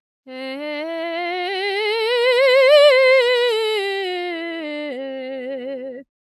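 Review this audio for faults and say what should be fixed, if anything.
Nothing to fix: no faults were found in the music, so no corrective work is needed.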